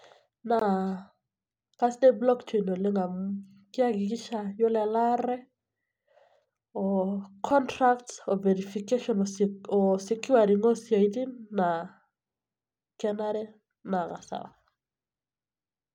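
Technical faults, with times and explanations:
0.59 s and 7.50 s (just before "contracts oo verification"), block of digital silence: the speech drops to silence for about 20 ms, then about 5 ms, with no fade. The hard edges set it apart from a fading dropout or a concealed gap.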